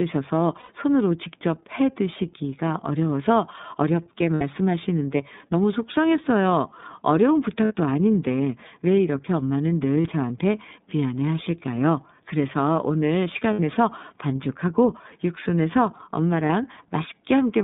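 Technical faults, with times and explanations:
Throughout, iLBC codec: the speech sounds boxed-in and slightly rough, with a synthetic edge that is plainly audible. Nothing sits below about 150 Hz or above 3.7 kHz, so sibilants lose their crispness. The codec models each 30 ms block of the signal on its own, and it fits iLBC's 13.33 kbps mode. The thin bit budget and coarse modelling of the excitation give the voice its slightly artificial grain.
0.59–0.70 s, 4.35–4.42 s, 7.65–7.73 s, 10.03–10.06 s, 13.53–13.60 s and 16.47–16.50 s, lost iLBC frames: at each point the speech briefly turns into a held, buzzy or breathy vowel-like tone. It lasts about 90 ms at the first point, 60 ms at the second, third and fifth, and 30 ms at the fourth and sixth, which fits one to three dropped 30 ms frames. The decoder fills each gap by repeating the last pitch cycle mixed with noise. Because every frame decodes independently, clean speech returns right after each gap.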